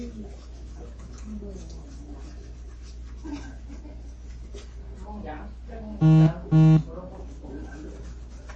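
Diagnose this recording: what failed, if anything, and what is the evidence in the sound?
The codec stage failed. Throughout, nothing is heard above 8.3 kHz, and watery, swirling artefacts mark likely low-bitrate MP3 compression, fitting roughly 32 kbps, not a plain low-pass filter.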